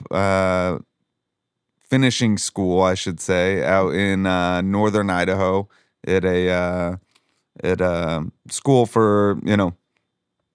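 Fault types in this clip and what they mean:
Nothing here calls for a line: listening through this speech, there's no fault to point to.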